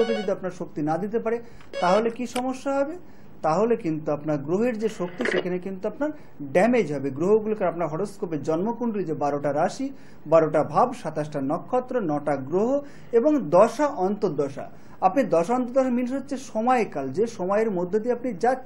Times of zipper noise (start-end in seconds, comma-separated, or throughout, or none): none